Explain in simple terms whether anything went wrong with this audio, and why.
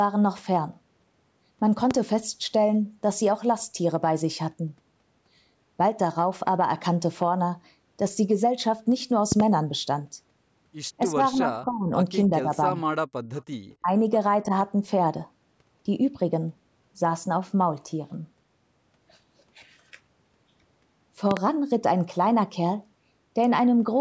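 Five sharp pops or thumps jump out above the speech. The first is a single pop at 1.91 to 1.93 s. Then come quick pairs at 9.32 to 9.42 s and at 21.31 to 21.39 s. Each is much louder than the talking, which carries on underneath. These are loud pops, likely caused by a sudden electrical jolt from a plug, a switch, static or a glitch in the audio hardware, which pushes a spike straight into the signal.

Between 11.11 and 14.53 s the voice keeps dipping or briefly fading out in short pieces. This happens at 11.11 to 11.18 s, 11.34 to 11.91 s (the longest, about half a second), 12.29 to 12.50 s, 12.70 to 12.80 s, 13.82 to 13.92 s (the deepest dip) and 14.47 to 14.53 s. This is speech suppressed in double talk. Most likely both people spoke at once, and the call's echo control couldn't tell this voice from the loudspeaker sound, so it turned everything down.

At 13.38 to 13.43 s a faint, delayed scrap of the voice comes back, arriving about 0.29 s after the original. 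This is an echo leak. Probably one side was on a loudspeaker, and its microphone picked some of the sound back up. The echo control didn't remove all of it, so a bit was sent back down the line.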